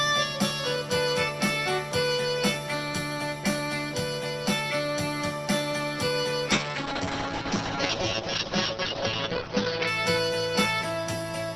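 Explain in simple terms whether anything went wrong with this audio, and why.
From about 6.52 s to 9.93 s the sound turns rough and muffled, as if heard through a wall, losing its crisp top end before clearing again. This is a call bitrate drop: the connection judged it had less room, so the encoder was told to squeeze the audio into far fewer bits. It coded more coarsely and cut everything above roughly 6 kHz, which is why brightness and detail vanish for those few seconds.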